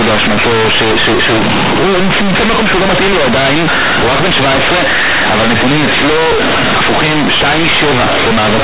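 From start to finish the speech is buried in loud, buzzy distortion, the signature of companded audio read as linear. The A-law telephone bytes, band-limited below 4 kHz as expected for G.711, are played back as plain linear 8-bit samples without expansion. Every sign change then jumps across about half the output range, so faint sounds come out as loud as strong ones. Overdrive clipping would flatten only the peaks, but here the pauses roar with noise too.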